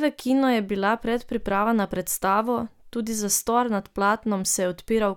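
Nothing in this speech recording stands out as a technical fault; there's nothing here to flag.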